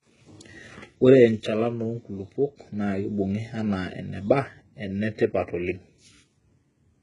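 From start to finish, the treble has a synthetic, gritty edge. The sibilants sound metallic and lisped, and nothing comes through above 11 kHz. The damage is heavy and steady across the whole clip. The likely cause is HE-AAC compression, which fits a version 2 encoder at roughly 12 kbps. The codec keeps only the lower spectrum. It fakes the top by copying lower bands upward. Those copied harmonics don't line up with the real ones.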